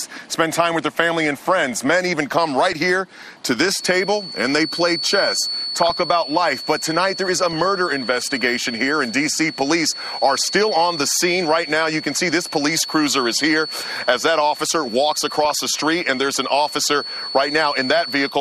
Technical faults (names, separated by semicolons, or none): MP2 compression; feedback whistle